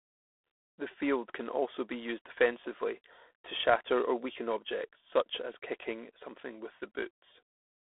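From start to finish the speech carries G.726 ADPCM damage. Each sample is sent only as a coarse step away from a running prediction, and the rasping, gritty hiss that swells and fades with the speech level fits the 24 kbit/s rate, three bits a sample. On a spectrogram the energy stops at a hard ceiling near 3.8 kHz, the telephone band runs roughly 300 Hz to 3.5 kHz, and grainy noise fills the gaps between harmonics wherever the speech is loud.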